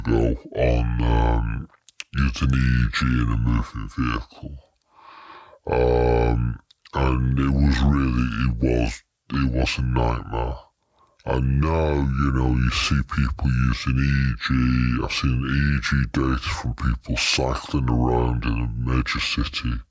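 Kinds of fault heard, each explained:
Wrong sample rate: The playback ran slower than the original capture with no rate conversion, and the drop fits audio recorded at 24 kHz being played back at 16 kHz. Speed and pitch fall together by the same ratio. The whole speech clip runs at two-thirds of its proper speed, stretched and sluggish, and every voice sits about 7 semitones lower than it should, giving a deep, dragging tone from start to finish.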